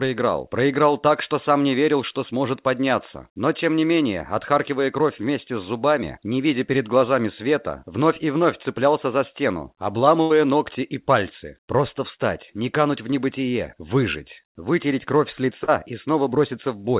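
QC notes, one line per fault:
10.22–10.32 s, burst of packet loss: about 80 ms of audio never arrived in time, so the receiver stretched the preceding sound and faded it across the gap. The result is a brief held, dimming tail, after which the audio picks up further along with that stretch gone.
15.64–15.70 s, short concealed packet loss: roughly 40 ms went missing and was patched by extrapolating the last sound before blending back into the real signal, heard as a quick smear or wobble within audio that carries nothing above 4 kHz.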